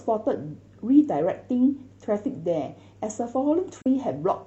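At 3.82 s to 3.86 s the speech drops into a brief AAC frame loss with muting, a gap of about 43 ms that fits a single lost frame zeroed by the decoder. Overlapping windows taper it, so the waveform shows a soft fade-down and fade-up, and the spectrogram a narrow blank column.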